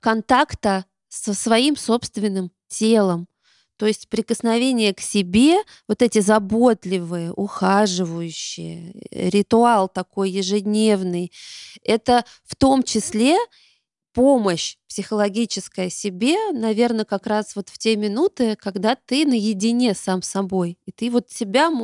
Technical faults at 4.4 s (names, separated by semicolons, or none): none